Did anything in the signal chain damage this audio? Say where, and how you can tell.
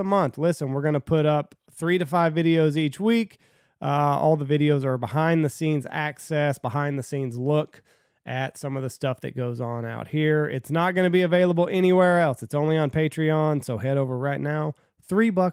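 No, nothing in the signal chain damaged this audio.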